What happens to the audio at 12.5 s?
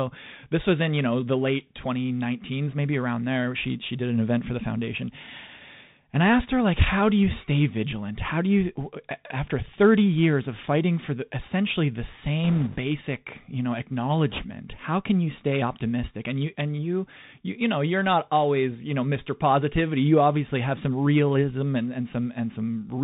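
Right after "for the essentially the", from 12.44 to 12.76 s, the speech picks up a rushing, crackly noise from bit errors on a Bluetooth voice link. Around two percent of the bits are flipped. Each CVSD bit only nudges the waveform up or down by one small step, and errors die away fast, so the damage comes out as a grainy wash rather than sharp clicks.

That burst sits on top of the Bluetooth CVSD headset codec, which runs through the whole clip at 64 kbps. Its one-bit delta coding cuts everything above 4 kHz, leaves a granular hiss under the speech, and makes s sounds scratchy where fast, loud high content outruns the step size.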